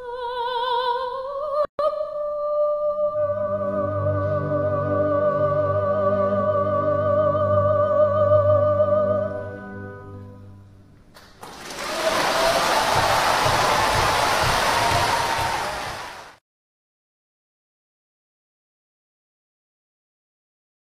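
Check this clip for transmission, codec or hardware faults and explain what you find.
There's one fault here: a gap at a join of encoded pieces, running from about 1.65 to 1.79 s, roughly 141 ms long. It looks like the audio was encoded in separate chunks and stitched together untrimmed, so the encoder's start-up delay and the padding on the last frame both stayed in. You hear the sound simply drop out for that moment, with the edges softened by the codec, then pick up exactly where it left off.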